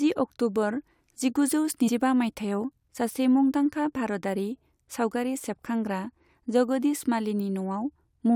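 At 1.87 to 1.89 s, just before "मायथाइयाव सासे मुंदांखा भारतारि", the speech jumps forward. These are compressed frames skipped: about 100 ms of audio never plays, which fits roughly four 23.2 ms frames.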